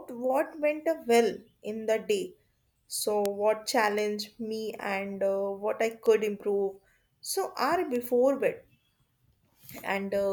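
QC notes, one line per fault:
2.12, 3.26, 3.99, 6.06, 7.96 s: bit error spike. Single bits flipped in stored or transmitted data, so one or two samples jump by a power of two and snap back. Each is a sharp broadband tick unrelated to the speech, at about -22 dBFS just after "in the", about -10 dBFS at 3.26 s, about -16 dBFS just before "me and", and about -22 dBFS at the last two.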